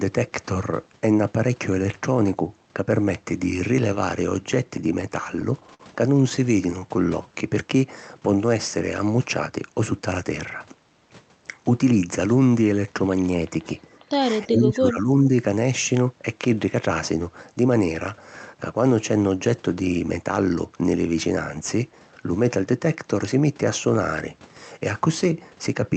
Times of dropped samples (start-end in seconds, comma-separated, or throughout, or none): none